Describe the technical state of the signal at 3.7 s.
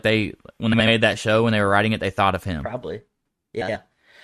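Frames out of order, 3.61 to 3.76 s: two adjacent blocks of about 70 ms play swapped, giving a garbled flutter; spectrogram shows abrupt discontinuities at three joins.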